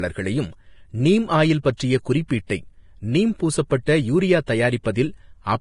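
From start to finish the speech sounds hissy and grainy, with roughened tones and softened consonant attacks, most likely from heavy Vorbis compression at a rate that fits roughly 30 kbps. The encoder cuts off everything above about 10.6 kHz and quantises the remaining treble so coarsely that fine detail turns into noise-like texture. On a spectrogram this shows as a hard ceiling near 10.6 kHz, with blotchy, speckled energy replacing smooth harmonics in the upper bands.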